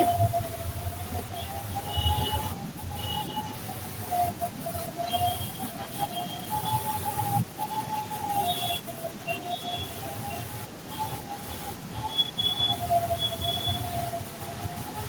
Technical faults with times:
0.53-0.62 echo leak
1.14-5.32 echo leak
5.73-7.11 echo leak
7.58-8.79 echo leak
9.10-15.08 echo leak

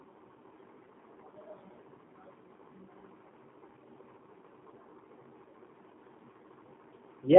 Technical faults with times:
0.00-7.39 G.729 codec

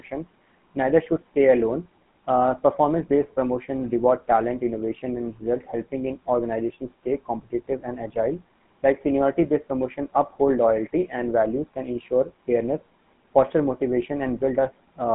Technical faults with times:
0.00-15.14 GSM full-rate codec

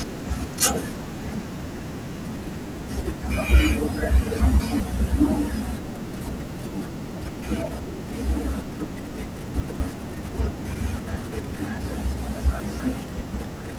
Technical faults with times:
1.60-2.20 chunks out of order
4.40-4.80 chunks out of order
6.20-6.60 chunks out of order
9.40-9.80 chunks out of order
12.40-12.80 chunks out of order

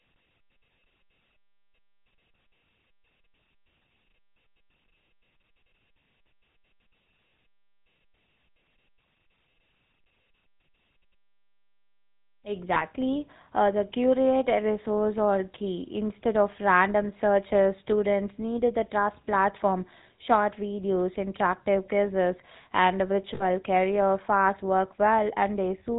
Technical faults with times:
0.00-25.98 GSM full-rate codec
10.02-10.06 lost GSM frames
12.74-12.83 lost GSM frames
23.34-23.43 lost GSM frames

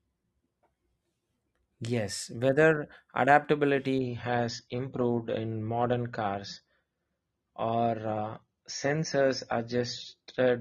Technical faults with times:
3.99-10.61 adaptive stream at a lower bitrate

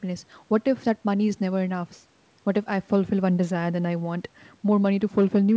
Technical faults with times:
none

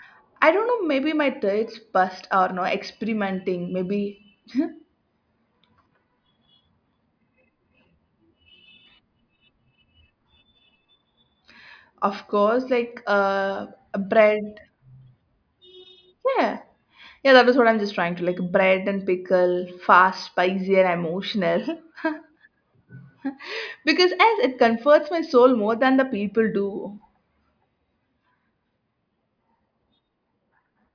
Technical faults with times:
none

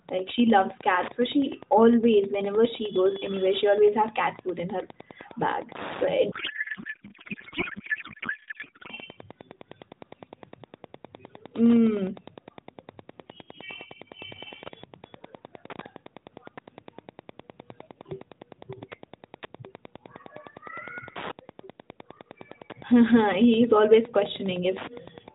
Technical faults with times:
0.00-25.35 Wi-Fi interference
6.32-8.91 codec payload misread

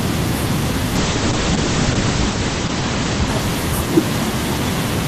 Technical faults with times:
0.96-4.37 call bitrate drop

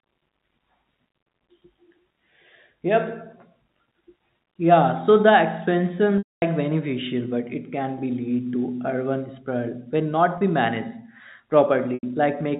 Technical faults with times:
6.18-6.42 packet loss with pitch repetition
10.38-10.41 packet loss with pitch repetition
11.94-12.03 packet loss with pitch repetition

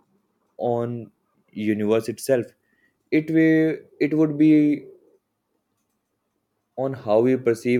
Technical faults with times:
none

